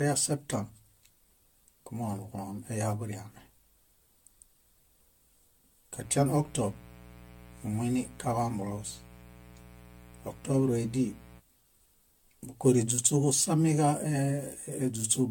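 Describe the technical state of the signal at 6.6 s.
At 6.6 s a steady, raspy buzz sits about 20 dB below the speech. It runs from 5.92 s to 11.42 s, so this moment falls inside it. This is mains buzz: sharp switching spikes from a dimmer, rectifier or unshielded connection enter the signal twice per cycle of a 60 Hz supply. That spiky shape produces a dense series of 60 Hz harmonics stretching up into the kHz range, which gives the tone its gritty edge.

Underneath, the speech sounds swirly, smeared and hollow, with blurred consonant onsets and a watery texture that is worse than a single pass at a modest bitrate would give. The likely cause is generation loss, with the audio decoded and re-encoded about ten times through an AAC codec, which fits a chain at roughly 96 kbit/s. Each pass quantises on a shifted frame grid, so noise and spectral holes accumulate.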